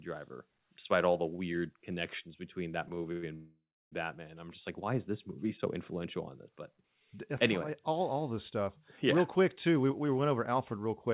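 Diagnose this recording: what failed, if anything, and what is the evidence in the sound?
Repeated stalls (stutter) at the network and jitter-buffer stage, from 2.88 to 3.25 s, right after "weird connections between that". Four gaps, the longest 104 ms, are bridged by 145 ms of continued sound, about 40% of the span. Packets arrived too slowly, so the buffer kept emptying. On a spectrogram these show as repeated, smeared copies of the preceding frame.

A call audio freeze follows from 3.35 to 3.94 s: 570 ms are inserted, with the last sound stretched into a fading buzz and then 290 ms of silence before the audio resumes where it stopped. The likely cause is packets held up in transit, leaving the jitter buffer empty. The waveform shows a decaying tail and then a flat line.

Jitter buffer speed-up from 9.68 to 11.11 s: the audio plays at 109% speed with unchanged pitch, as the receiver trimmed roughly 150 ms of pitch periods to shed excess buffered delay. 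The speech sounds hurried. On the spectrogram, the harmonic spacing stays constant while the syllables are compressed in time, all within the 4 kHz band of the call path.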